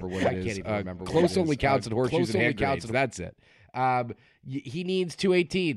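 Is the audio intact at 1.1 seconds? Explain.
No. A doubled audio track runs from the start to 2.92 s: a full-band copy trails about a second behind, a few decibels quieter, likely from a second, slower capture path. It sounds like a dry, out-of-step overlap, and a spectrogram shows the same patterns repeated about a second later.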